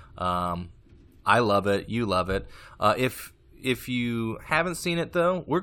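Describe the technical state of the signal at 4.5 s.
A brief glitch cuts into the speech at 4.48 s, right after "if if you", lasting only about 14 ms. It is damaged data in a compressed stream: a short stretch of the encoded bitstream is corrupt, so the decoder cannot read the frame there correctly, loses its place, and has to hunt for the next valid frame header before clean playback resumes. That brief mis-decoding is the glitch you hear.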